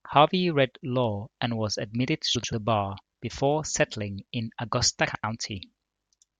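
Frames out of order twice: at 2.35 to 2.53 s and at 5.07 to 5.24 s, two adjacent runs of frames, each about 85 ms and likely four frames long, were decoded swapped. Each stretch plays with its halves exchanged, a garbled flutter, and no time is lost.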